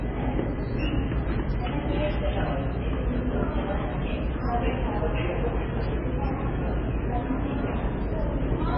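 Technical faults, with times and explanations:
Throughout, MP3 compression: nothing comes through above 5.5 kHz, so it all sounds dull, with heavy watery swirling and smeared attacks. That's likely a bit-starved MP3 encoder, fitting roughly 16 kbps, chopping the treble and dropping weak frequency lines frame to frame.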